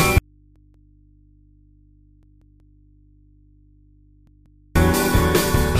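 At 0.18 s the sound cuts off abruptly to mains hum about 35 dB down, returning just as suddenly at 4.75 s. This audio dropout to a faint residue, likely a lost input feed, differs from a pause or fade because it has no taper. Within that span, a repeated buffer plays the same 186 ms piece extra times: twice at 0.56 to 0.93 s, three times at 2.23 to 2.79 s and twice at 4.27 to 4.64 s. Hard joins make these stutters rather than echoes, and the piece length fits an 8192-sample buffer.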